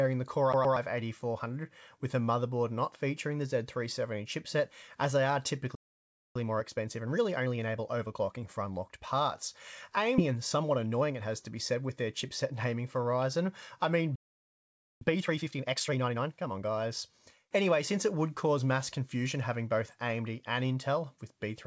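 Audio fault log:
0.53–0.77 s, CD stuck on one turn: A scratch throws the laser back one track at the same point on each revolution, so a 120 ms slice of audio plays twice in a row. Each jump adds a brief mute, which produces a quick, even, mechanical stutter.
5.75–6.36 s and 14.15–15.01 s, playback stall: The player likely ran short of data or had its output thread blocked. The sound cuts off mid-flow for about 0.60 s and then about 0.86 s before resuming where it stopped. The gaps are clear, abrupt silences.
6.36–9.36 s and 15.01–16.71 s, time-compressed catch-up: After each stall the player works off its backlog by cutting out small pieces and cross-fading the joins. Playback runs at 1.15 times normal speed after the first stall and 1.5 times after the second. Pitch holds steady but the audio sounds rushed.
10.18 s, skip ahead: About a second of audio was discarded while later audio was already queued, and delay dropped by roughly that amount. 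The two sides are spliced with no fill, so playback jumps forward abruptly and the material in between is simply gone.
10.28–12.82 s, jitter buffer speed-up: The buffer was holding more than its target, so the receiver trimmed many short pitch-period pieces, about a fifth of a second in total. The audio runs at 107 percent speed with unchanged pitch and comes across as hurried. Like everything in this call path, it passes nothing above 8 kHz.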